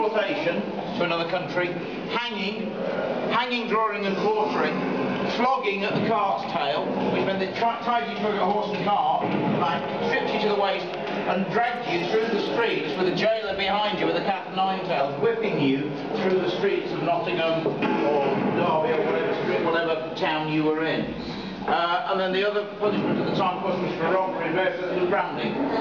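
From 11.67 to 13.10 s, GSM signalling bursts intrude: a nearby 2G phone's radio pulses are rectified by the audio circuit, giving a galloping dit-dit-dit of short buzzes at 217 Hz, well below the main sound. The stop-start rhythm separates it from steady mains hum.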